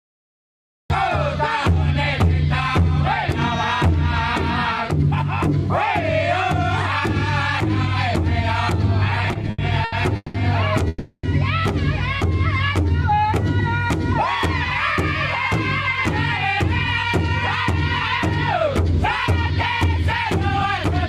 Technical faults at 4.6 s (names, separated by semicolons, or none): none